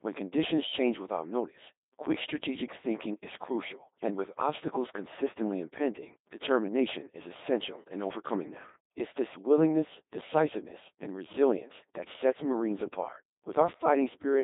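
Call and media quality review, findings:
Codec 2 vocoder, entire clip. Robotic, buzzy speech in a 250 Hz to 3.7 kHz band, nothing above. The decoder resynthesises the voice from sine waves using only pitch, voicing, energy and envelope, so the waveform is lost. The heavy damage fits a 2.4 kbit/s mode.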